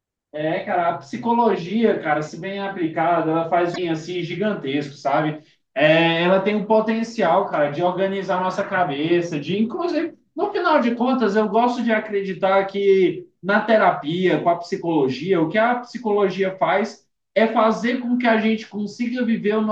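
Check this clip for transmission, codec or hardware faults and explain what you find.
There's one fault in this speech clip: damaged data in a compressed stream, from 3.71 to 3.79 s. For about 76 ms a chunk of the coded stream arrives corrupted, so the decoder can't make sense of those frames, drops sync and hunts for the next valid frame header before picking up again. You hear it as a brief glitch in the speech.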